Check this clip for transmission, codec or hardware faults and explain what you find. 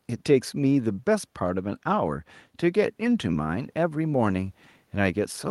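No transmission, codec or hardware faults are audible here.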